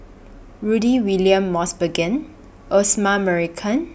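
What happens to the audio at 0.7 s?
At 0.7 s the speech carries on cleanly, with no dropout, click, distortion or other fault at that point.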